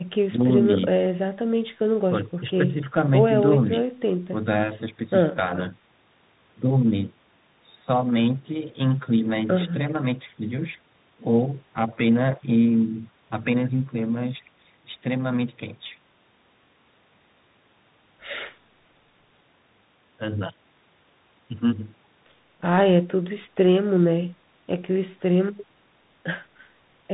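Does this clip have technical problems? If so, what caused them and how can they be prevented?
Yes. Bluetooth CVSD headset codec, throughout: audio is squeezed into single up-or-down bits, consistent with a 64 kbit/s link, so nothing passes above 4 kHz, s sounds turn scratchy, and granular hiss sits underneath. Prevent it by using a wideband headset codec such as mSBC or LC3, or a wired microphone.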